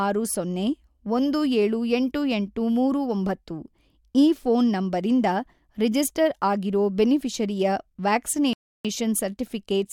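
A rebuffering stall hits at 8.53 s. The player ran dry of downloaded audio and the speech falls silent for about 0.31 s. It then resumes exactly where it stopped, with nothing missing.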